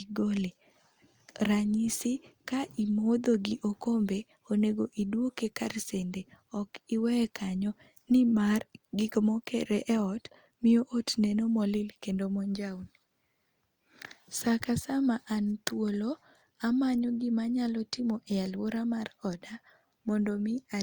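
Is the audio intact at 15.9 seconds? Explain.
Yes, the speech at 15.9 seconds plays through intact, with no audible fault at that moment.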